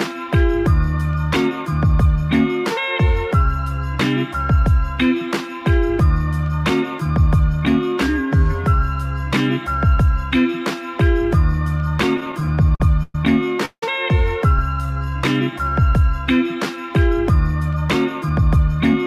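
From 12.17 to 13.15 s, packets kept arriving late, so the jitter buffer repeatedly ran dry. These repeated stalls (stutter) stretch the last sound across 11 gaps, the longest 113 ms.

At 13.65 s a call audio freeze, likely from packets held up in transit, holds the sound for 170 ms. It fades into 80 ms of silence before resuming at 13.83 s.

From 14.59 to 15.81 s, a jitter buffer slow-down rebuilds the reserve by repeating pitch periods. This adds 184 ms, so the audio drags at 86% speed with unchanged pitch.

From 17.61 to 19.03 s, a jitter buffer speed-up trims excess buffered audio, cutting around 150 ms. The sound runs hurried at 109% speed, pitch intact.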